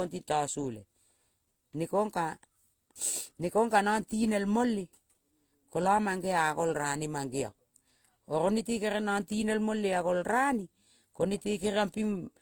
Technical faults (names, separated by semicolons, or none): transcoding between lossy codecs